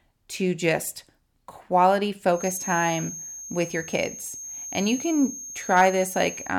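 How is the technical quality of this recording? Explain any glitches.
The recording has one clear fault, a feedback whistle.

Feedback whistle, from 2.30 s to the end, right after "to just quality": a thin, steady tone at 6.4 kHz sits behind the speech, roughly 15 dB under it, swelling and fading slowly in level. The likely cause is a loudspeaker-to-microphone loop running just at its stability limit, so that single frequency keeps recirculating and ringing on without building into a howl.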